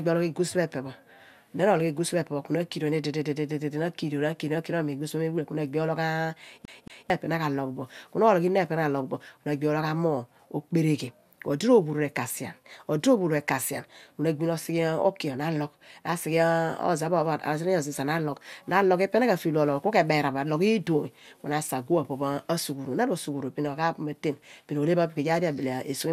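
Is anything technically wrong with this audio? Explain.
Yes, there's a CD stuck on one turn from 6.65 to 7.1 s in this speech. A scratch knocks the laser back a track each revolution, so the same 224 ms slice plays twice, with a tiny mute at each jump: that quick, even skipping-disc stutter.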